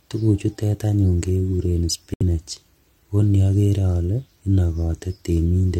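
A corrupt frame muted dropout hits this speech clip from 2.14 to 2.23 s, an abrupt 88 ms hole of silence. Damaged compressed frames were rejected by the decoder and replaced with silence rather than concealed; the length fits about three consecutive codec frames, and the timing afterwards stays intact.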